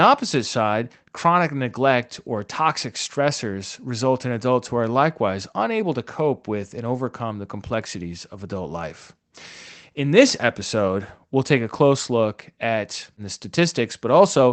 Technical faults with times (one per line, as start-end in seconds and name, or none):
none